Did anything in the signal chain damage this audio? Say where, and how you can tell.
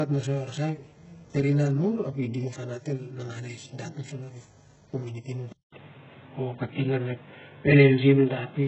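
Yes. At the codec stage, the whole clip is band-limited with nothing above 8 kHz, and the treble sounds synthetic and gritty, with s sounds turning lispy. This is likely HE-AAC compression at a very low bitrate, around 8 kbps, with the top rebuilt by spectral band replication rather than coded.

At the input or driver stage, at 5.52 s the audio drops out for 200 ms and then returns duller and boxier, with nothing above 3.8 kHz, a level shift of roughly 5 dB, and a new noise floor about 40 dB down. That points to the input likely being switched to a poorer device.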